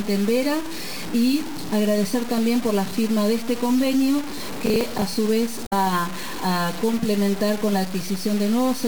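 Grainy distortion follows the sound throughout, with noise only about 15 dB below it. Likely cause: low bit depth without dither, probably around 4 bits, truncated.

From 4.30 to 5.17 s comes processor overload crackle. Missed buffers of roughly 10 ms repeat old audio with hard edges. It sounds like gritty tearing.

From 5.63 to 5.73 s, damaged data in a compressed stream makes the decoder lose sync. A brief glitch follows.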